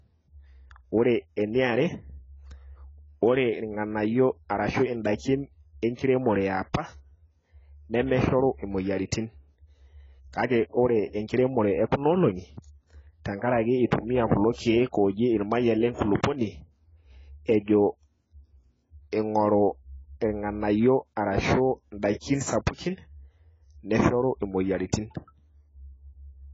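From start to finish the speech is dull and smeared. Nothing reaches above 7.6 kHz. Sibilants turn fizzy and the tone warbles. The cause is likely heavy AAC compression at a bitrate that sounds near 16 kbps. It discards the upper bands and coarsely quantises the rest.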